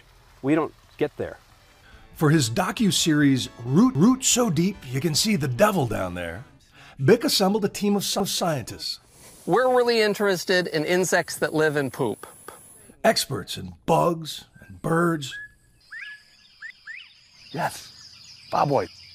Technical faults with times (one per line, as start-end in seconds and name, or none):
3.95-4.20 overlapping chunks
8.20-8.45 overlapping chunks
12.45-12.70 overlapping chunks
16.70-16.95 overlapping chunks